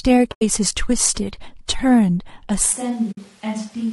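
The speech has a rough, grainy texture throughout. This is low-delay AAC compression, likely AAC-ELD at a low rate, which fits about 32 kbps. Its short frames resolve pitch harmonics poorly. Noise fills the gaps between harmonics, and the top band sounds synthetic.

From 0.31 to 0.42 s there is AAC frame loss with muting. About 100 ms of sound drops out, which fits five lost frames. The decoder zeroed them. Overlapping windows fade the sound out and back in, leaving a soft-edged hole.

At 2.74 s the sound switches to a distant microphone, and it stays that way to the end. The close microphone's signal was likely lost. The voice turns roomy and hollow at once, with thinner bass. The level drops by roughly 10 dB, and room noise rises, though it stays well below the speech.

From 3.11 to 3.18 s there is a second AAC frame loss with muting. About 60 ms goes silent, which fits three lost frames. 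It again fades out and in softly.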